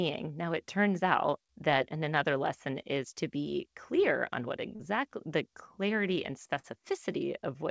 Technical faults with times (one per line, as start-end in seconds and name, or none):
4.76-4.82 short concealed packet loss
6.59-6.66 short concealed packet loss